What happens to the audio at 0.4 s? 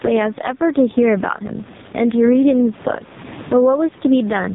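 At 0.4 s, as throughout the clip, the microphone gain is likely set far too high, so a fast limiter clamps down on each loud syllable. The background sits about 28 dB below the speech, and a gain pumping swing of around 15 dB squashes the level range.

The speech also passes through an AMR narrowband mobile codec at a heavily damaging setting, which fits its lowest 4.75 kbps mode. A pulse-driven vocal-tract model rebuilds the speech, so nothing above 3.8 kHz survives, the voice is buzzy and synthetic, and the background noise warbles.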